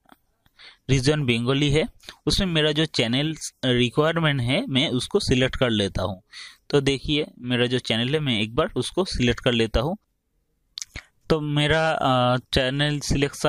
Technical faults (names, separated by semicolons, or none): none